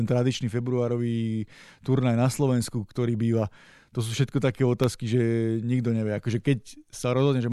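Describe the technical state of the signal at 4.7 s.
At 4.7 s the signal is inside a run of periodic USB or driver dropouts (3.83–6.83 s): every 1.0 s a sub-millisecond gap of silence cuts into the speech, giving regular ticks.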